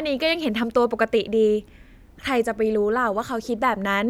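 No technical faults can be heard anywhere in the speech recording. Nothing in it calls for a timestamp or a closer look.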